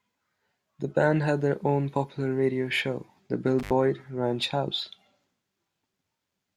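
A speech recording with one intermittent contact fault between 3.59 and 3.73 s. In that span the signal drops out for about 78 ms, with a burst of crackle as the connection breaks and again as it remakes, and faint hiss while the path is open. The cause is a loose plug or cable conductor momentarily losing contact, so the audio is interrupted at the connector rather than at the source or in processing.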